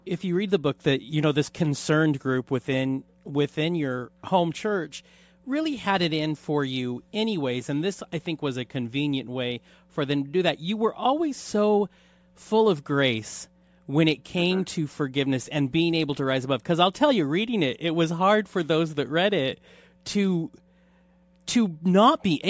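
Aliasing runs through the whole speech clip. The audio was downsampled without an anti-alias filter, apparently to a 16 kHz rate, so content above 8 kHz folds back as unrelated tones about 30 dB down, giving sibilants a gritty, metallic edge. Plain band-limiting would only dull them.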